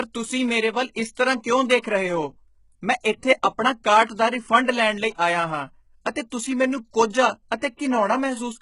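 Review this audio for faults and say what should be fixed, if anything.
HE-AAC compression, likely, throughout: the treble is a rebuilt copy of lower bands, so s sounds turn gritty and lispy, with nothing above 11.1 kHz, which fits a bitrate near 12 kbps. Encode the speech at a higher bitrate with plain AAC or Opus rather than band replication.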